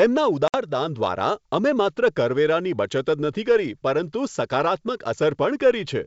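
Packet loss on an ADPCM call strikes between 0.48 and 0.57 s. About 60 ms of the wideband speech, a few packets' worth, drops out and is replaced by silence, leaving a hole with abrupt edges. The loss also throws the decoder's adaptive predictor and step size out of line with the sender's. When the speech resumes it comes back disturbed and briefly distorted, then settles within some tens of milliseconds once the two sides' states converge again.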